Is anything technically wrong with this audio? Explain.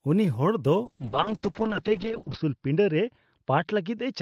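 Yes, there's a call bitrate drop from 0.86 s, right after "ᱩᱱᱤ ᱦᱚᱲ ᱫᱚ", through to the end. The encoder gets starved of bits and the top end narrows from 20 kHz to 6 kHz, so the speech turns muffled and rough, consistent with a fall from about 32 kbps to 9 kbps. It sits at its worst for about 1.5 s and never fully recovers.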